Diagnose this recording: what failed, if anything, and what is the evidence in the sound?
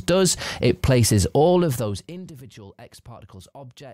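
The fault is zipper noise at the driver or buffer stage. From 1.57 to 2.34 s, a fine ticking rides on the sound as the level drops by roughly 25 dB. The gain moves in unsmoothed steps, about 150 per second, which fits one update per buffer.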